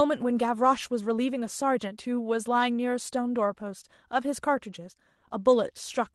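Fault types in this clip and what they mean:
Clock drift between sender and receiver: the sending device's clock runs roughly 5 percent fast, so the receiver's jitter buffer keeps overfilling. The speech plays slightly hurried throughout, and a waveform shows small, unevenly spaced discontinuities where material is trimmed, with no gaps or silences.
Repeated timing corrections: from 0.23 s to 6.10 s the receiver keeps discarding short slices to catch up, yielding an effective speed of 104 percent. These are heard, if at all, as faint hiccups and uneven tempo, and on a spectrogram as tiny vertical seams breaking otherwise continuous harmonics.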